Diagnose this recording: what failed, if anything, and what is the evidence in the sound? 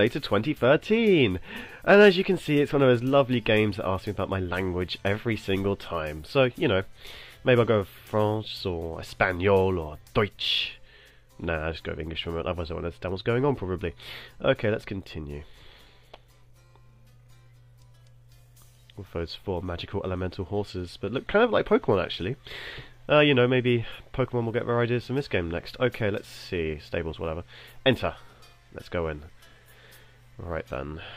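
Nothing here points to a failure at any stage, so there's no fault to diagnose and the audio can be taken as it comes.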